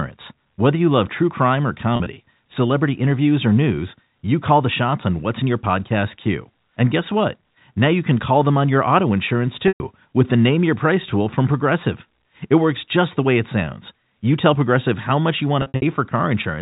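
Packet loss with pitch repetition strikes the speech three times. The receiver bridged each gap by repeating the last pitch period. From 1.96 to 2.16 s, 80 ms is lost in short bursts no longer than 40 ms, giving a brief buzzy hold. At 9.68 to 9.80 s, 120 ms goes missing at once, so the repetition fades into silence before the speech cross-fades back. From 15.62 to 15.82 s, 160 ms drops out in runs up to 60 ms, sounding buzzy and held.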